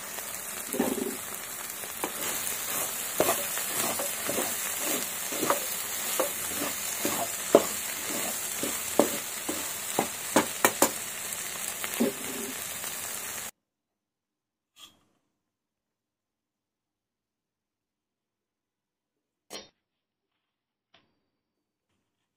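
From 2.33 to 3.24 s a steady 100 Hz buzz sits on the audio, which hurries along about 1.09 times faster at roughly normal pitch. This is a block size mismatch (truncated): one stage writes longer blocks than the next reads, so each block's tail is discarded.

From 19.55 to 21.55 s the quality abruptly drops and smeary, swirling codec artefacts appear, with no gap. This is an adaptive stream at a lower bitrate. The sound points to a switch from about 128 kbit/s MP3 down to roughly 24 kbit/s.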